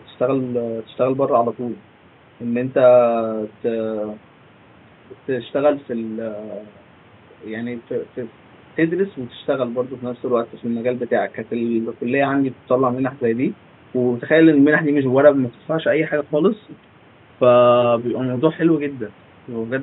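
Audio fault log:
No technical faults turn up anywhere in the signal path, and the only thing beneath the speech is the room's own background noise, sitting about 30 dB lower.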